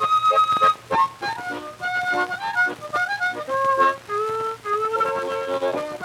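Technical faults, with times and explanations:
4.95–5.05 s, frames out of order: two adjacent blocks of coded audio, each about 46 ms long and consistent with two frames apiece, reached the decoder swapped and were played back that way. The roughly 0.1 s stretch runs with its halves exchanged, so the sound jumps forward, then back, then forward again. Each of the three joins breaks the waveform's continuity, giving a short garbled flutter. No time is lost overall.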